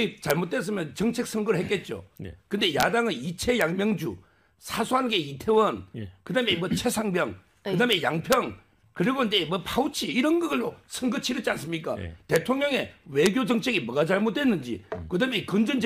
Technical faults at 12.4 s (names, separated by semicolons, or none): integer overflow